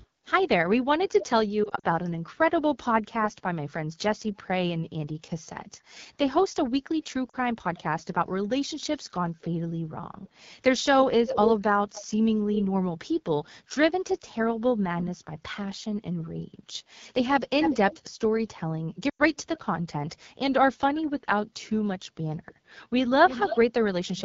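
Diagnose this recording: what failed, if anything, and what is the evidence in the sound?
At the codec stage, the whole recording carries the plainly audible damage of the AMR wideband (HD Voice) codec at a low rate. The speech sounds rough and raspy, which fits the 8.85 kbit/s mode. On a spectrogram, detail fades above 6.4 kHz, and the band from 6.4 to 7 kHz holds smooth, noise-like energy with no harmonic structure. The encoder models the vocal tract and excitation pulses only up to 6.4 kHz and fills the top band with shaped noise. At this rate the coarse modelling roughens everything below that.

Lost AMR speech frames show up at three points. From 1.64 to 1.86 s, about 100 ms of audio is lost in scattered gaps over roughly 200 ms, the longest lasting 40 ms. The sound wobbles and dips repeatedly. At 7.30 to 7.36 s, a 40 ms loss gives a short warble. At 19.09 to 19.21 s, a 100 ms loss drops to near silence before the speech returns weak. 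These are network-stage failures. The decoder covers each missing 20 ms frame by reusing the last pitch and vocal tract settings at falling gain. On a waveform this shows as a decaying envelope, and on a spectrogram as frozen, blurred harmonics.

An echo leak is heard from 23.28 to 24.22 s. A delayed copy of the speech, about 10 dB below it, trails the original by about 0.3 s. On a spectrogram the same harmonic shapes repeat faintly about 296 ms later. The cause is likely in call processing at the far end: a loudspeaker fed the microphone, and the echo canceller left part of that signal behind, so it was sent back.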